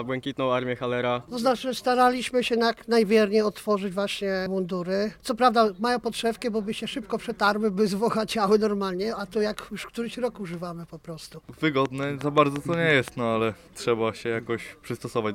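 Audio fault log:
11.86–13.09 s, train of clicks: about seven regular pops at 5.7 per second, some 10 dB above the sound, likely interference or a faulty connection.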